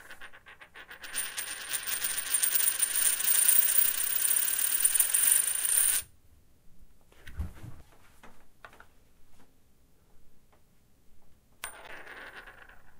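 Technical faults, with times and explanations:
7.77–7.82 s and 11.85–11.90 s, damaged data in a compressed stream: two brief glitches, about 40 to 50 ms each, where corrupted bytes made the decoder misread frames and lose sync. Such a glitch is heard as a chirp, squawk, click or short hole while the decoder searches for the next frame header.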